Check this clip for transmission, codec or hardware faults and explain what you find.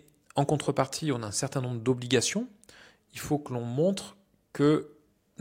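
Nothing stood out on listening to this speech recording.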